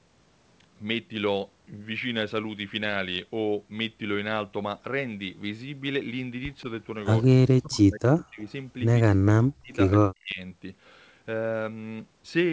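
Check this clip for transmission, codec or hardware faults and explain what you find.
The clip shows two echo-canceller faults in the speech, both in its second half.

Echo leak, 7.22 to 7.27 s: a faint, delayed ghost of the voice flickers in, about 35 dB below the speech and trailing it by 177 ms. The likely cause is a loudspeaker on the far side whose echo canceller let a scrap of its microphone pickup through and sent it back.

Speech suppressed in double talk, 7.35 to 8.41 s, 9.06 to 9.73 s and 10.06 to 10.4 s: the voice sinks sharply, in places by around 40 dB. Likely both sides were talking at once, so the echo canceller could not separate this talker from loudspeaker echo and turned everything down.

Across the clip, the G.722 call path at 64 kbps leaves nothing above 8 kHz.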